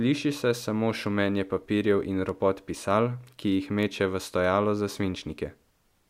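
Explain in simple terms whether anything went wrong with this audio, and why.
A steady pattern of word clock ticks runs through the speech from 0.14 s to 5.98 s: sharp clicks of uneven strength about every third of a second, around twenty in all. They come from a digital connection where the receiving device keeps its own time instead of following the sender's clock. The two clocks differ only slightly, by a few tens of parts per million, but each time they drift a full sample apart, one sample is lost or doubled, and that slip is heard as a tick.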